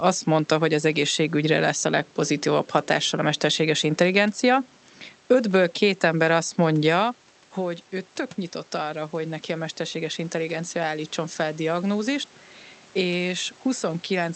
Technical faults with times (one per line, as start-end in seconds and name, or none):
8.72-11.95 automatic gain rising